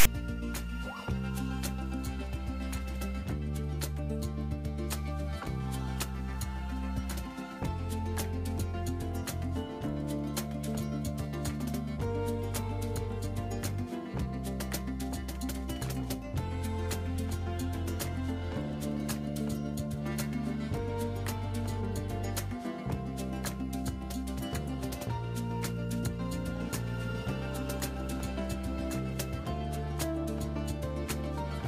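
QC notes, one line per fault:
0.00–0.05 s, file tags played as audio: text tag bytes at the start are decoded as samples, giving a brief hard-edged rasp pushed off-centre. The waveform shows a dense block sitting away from zero, and the spectrogram shows a broadband vertical slab with sharp onset and cutoff.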